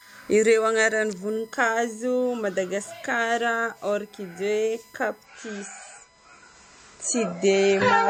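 The USB bus's 1 ms frame activity leaks into the audio path through power or ground, causing USB whine. It produces a steady 1 kHz tone throughout the speech, sitting roughly 35 dB below it, thin and constant beneath every pause.

From 5.25 s to the end, the adaptive stream switched to a lower bitrate after the connection slowed. The quality drops suddenly with no gap. Nothing remains above 8.3 kHz, and the speech turns dull and swirly, which fits a fall from about 128 to 32 kbit/s MP3.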